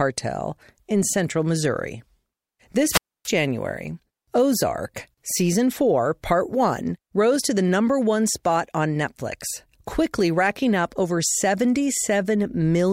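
A wireless microphone squelch dropout runs from 2.85 to 3.32 s. The analogue radio link weakens, hiss swells briefly, then the receiver's squelch mutes the speech for roughly 278 ms before the signal recovers and the speech returns.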